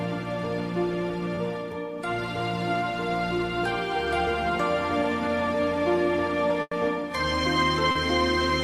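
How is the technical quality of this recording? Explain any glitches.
The recording has three transmission glitches: two short concealed packet losses and one burst of packet loss.

Short concealed packet loss occurs at 1.35–1.39 s and again at 7.91–7.97 s. Audio for about 20 ms and 40 ms respectively did not reach the decoder in time. The receiver filled each hole by extending the preceding sound, repeating its pitch where it was tonal and substituting shaped noise where it was not, then crossfaded back to the received signal. Each is heard as a brief smear or wobble.

A burst of packet loss runs from 6.61 to 6.73 s. About 100 ms of consecutive audio was lost or arrived too late to play. The concealment continued the last sound and attenuated it as the gap lengthened, giving a held buzz or fading hiss, followed by roughly 30 ms of silence. Playback then resumes further along, so the material that fell inside the gap is missing.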